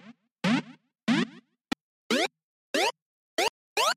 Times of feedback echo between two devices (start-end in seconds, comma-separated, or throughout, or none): none